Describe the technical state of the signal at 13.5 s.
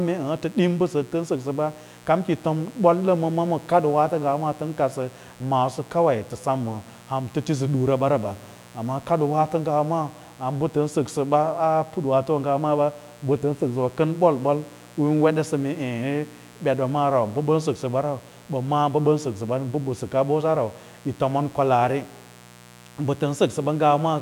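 Mains buzz runs through the whole speech clip, including 13.5 s. Switching spikes twice in every 60 Hz mains cycle add a steady raspy buzz roughly 25 dB down, drawn as evenly spaced horizontal harmonic lines on a spectrogram.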